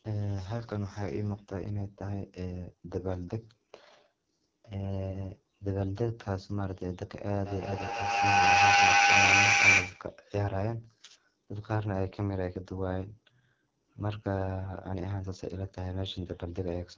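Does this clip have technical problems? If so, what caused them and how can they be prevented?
Yes. Throughout, the speech carries heavy AMR wideband (HD Voice) codec damage. It sounds rough and raspy, which fits the lowest rate of about 6.6 kbit/s. The coder models the voice as pulses through a vocal tract filter. At this rate too few bits remain to shape it. Preventing it means letting the network negotiate 12.65 kbit/s or higher.

From 7.45 to 10.21 s there is feedback echo between two devices. Each sound returns roughly every 150 ms, thinning and ringing. Repeats build up instead of fading, peaking about 14 dB above the speech. A second nearby device is replaying this microphone's signal. The echo canceller cannot remove sound it did not play. Preventing it means muting or moving the second device.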